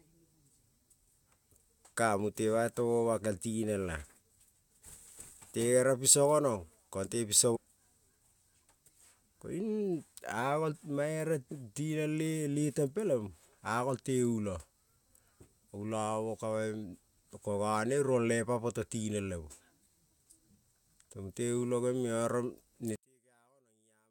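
At 7.55 s, right after "piso gonom kong te", the speech jumps forward abruptly with a brief blip at the join, and the sentence resumes further along than it should. A stream segment was likely skipped: one chunk of the segmented stream failed to arrive, and the player moved straight on to the next one. The missing stretch of programme is simply gone. All that marks the splice is that short click and the broken continuity of the speech.

From 22.96 s to the end of the clip at 24.11 s, the level collapses by about 39 dB, leaving only a faint residue of the speech. This is likely one channel inverted: one side of the stereo pair has reversed polarity, so when the channels are summed to mono, the centred material common to both cancels almost completely. What remains is just the small difference between the channels, a faint copy far below the original level.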